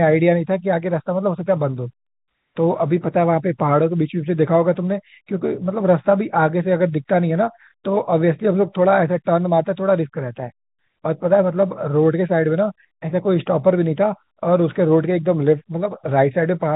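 No technical faults are audible.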